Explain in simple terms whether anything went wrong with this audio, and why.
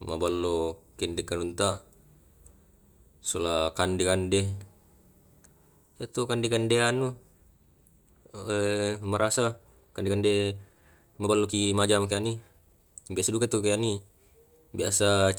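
Software likely squeezed part of the recording to fit a shorter length, playing it about 1.35 times faster while holding the pitch steady by cutting out tiny slices of sound. That is a time-stretched section, running from 8.44 to 14.1 seconds. Right at 8.44 the speech suddenly picks up pace without sounding any higher, and through that stretch it comes across as rushed.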